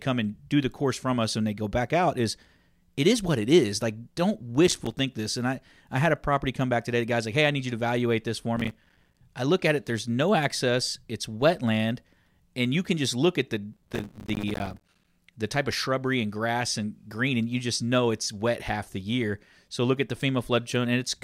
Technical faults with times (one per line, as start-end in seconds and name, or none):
4.67-4.99 processor overload crackle
8.56-9.21 processor overload crackle
13.73-15.10 processor overload crackle